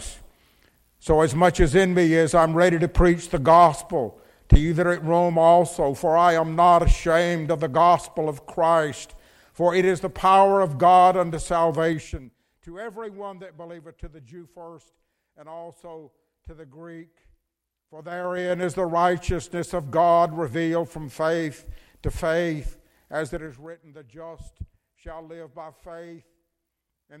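Zipper noise appears during three level moves, at 11.89–12.35 s (down about 20 dB), 17.93–18.67 s (up about 20 dB) and 23.22–23.78 s (down about 15 dB). The gain jumps in coarse 3 dB steps, each leaving a tick. These moves sound like a ratchet.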